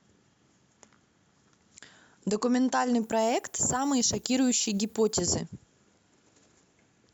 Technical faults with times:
3.02-5.20 low bit depth with noise shaping

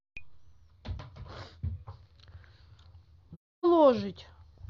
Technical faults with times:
3.33-3.65 AAC frame loss with muting

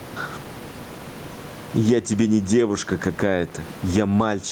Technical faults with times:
0.00-4.52 gain pumping

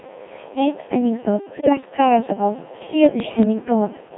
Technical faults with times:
0.00-4.17 Codec 2 vocoder
1.53-1.89 bit errors on digital voice radio
3.20-3.45 bit errors on digital voice radio

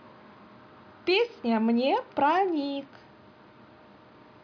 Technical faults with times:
none

